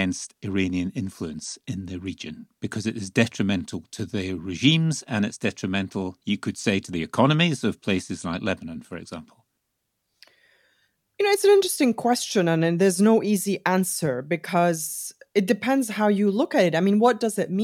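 No technical faults can be heard anywhere in the recording. The speech runs without any break or disturbance in the signal.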